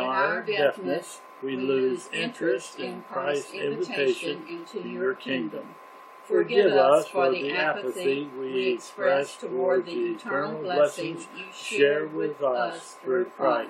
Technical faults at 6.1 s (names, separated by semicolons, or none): none